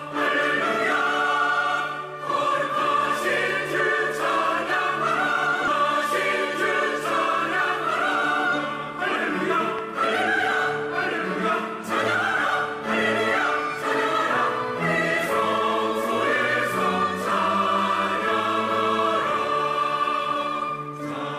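At 5.67 to 5.69 s a skip ahead occurs: about a second of sound vanishes and both sides join directly, a sudden jump rather than a silent gap. Between 9.79 and 9.81 s a single loud pop peaks about 10 dB above the sound, likely a voltage spike from a plug or static. It is one sharp click over continuing sound, with nothing lost. From 20.18 to 21.03 s a jitter buffer speed-up plays the sound at 111% speed with unchanged pitch, trimming about a tenth of a second to shrink the buffer. It is a hurried stretch, not a single jump.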